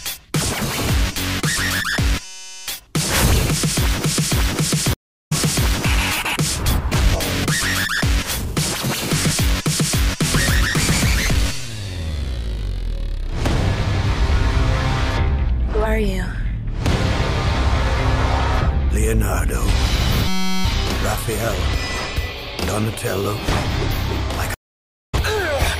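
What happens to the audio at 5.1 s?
A stream reconnect falls there, from 4.93 to 5.33 s. The connection drops, leaving about 0.37 s of silence. A fresh decoder then starts mid-stream. The sound picks up roughly a fifth of a second further on, so a short stretch is skipped.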